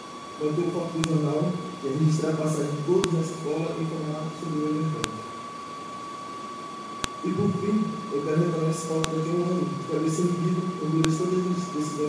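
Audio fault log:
1.04, 3.04, 5.04, 7.04, 9.04 and 11.05 s: file header played as audio. Each is a sharp, loud click, regardless of the surrounding sound, every 2 s. Pieces were joined without stripping their WAV headers, so those header bytes play back as samples.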